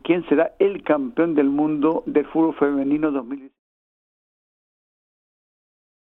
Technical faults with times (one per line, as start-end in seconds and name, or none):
none